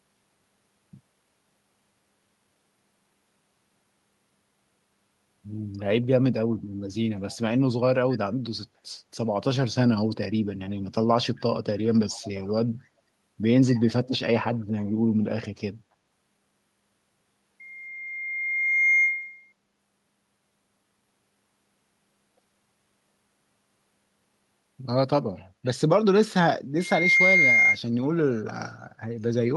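At 7.31, 12.1 and 13.78 s, faint delayed scraps of speech return about 272 ms late, from echo leak, likely an echo canceller missing loudspeaker pickup. At 17.60 to 19.53 s and 26.78 to 27.79 s, loudspeaker feedback squeal swells at 2.1 kHz, slower then faster, peaking above the speech.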